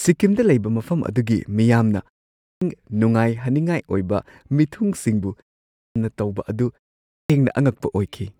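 At 2.34 s, 5.64 s and 7.00 s, speech resumes after pauses of 0.33 s, 0.3 s and 0.3 s with its opening cut away: a clipped start after a pause. Each time, the output path needs time to wake or re-lock after going idle, so the first 275 ms, 316 ms and 297 ms are lost, ending at 2.62 s, 5.96 s and 7.30 s. The speech then jumps in abruptly from silence, missing its initial sounds.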